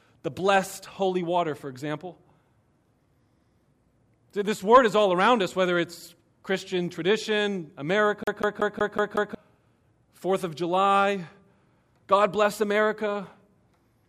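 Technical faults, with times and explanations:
8.24 to 9.35 s, CD stuck on one turn: a scratch kept throwing the laser back one track at the same point on each rotation, so a 185 ms slice of the speech replays six times, each jump marked by a brief mute, giving a fast, even skipping stutter.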